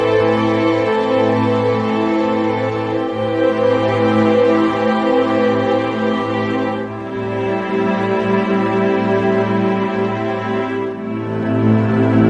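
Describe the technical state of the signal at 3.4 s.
At 3.4 s the signal is intact, with no audible fault at that moment.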